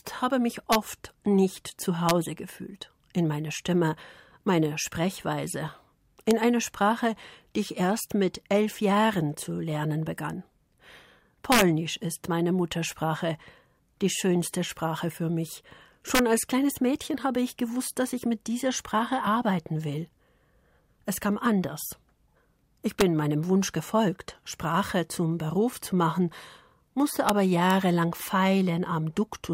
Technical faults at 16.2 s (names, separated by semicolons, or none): integer overflow